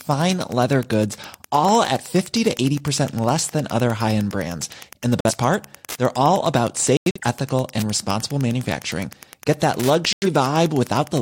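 Wi-Fi interference runs through the whole recording as a steady ticking, about ten ticks a second, sitting roughly 25 dB below the speech. A nearby Wi-Fi radio transmits its beacon every 102.4 ms, and the audio circuit picks up and rectifies each pulse. The ticks therefore land at a fixed rhythm that has nothing to do with the speech. The pattern comes from the radio's timing, not from anything in the recorded sound.

Clock drift buffer slips start at 0.13 s and recur every 0.78 s through to 11.01 s as a regular click while the speech continues. The likely cause is two devices running on independent clocks that disagree by something like 200 parts per million. The buffer between them slowly drifts until a handful of samples is dropped or repeated. That produces a discontinuity in the waveform at each correction, and the steady spacing gives it away.

Corrupt frame muted faults cut three sudden holes into the speech: at 5.21 s for 0.11 s, at 6.97 s for 0.27 s, and at 10.13 s for 0.15 s. 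Each gap begins abruptly, as when a decoder rejects a compressed frame with damaged bits and the player substitutes silence. The lengths fit one, five and two frames respectively. Because silence replaces the lost audio rather than the audio being skipped, the timing of the surrounding speech stays intact.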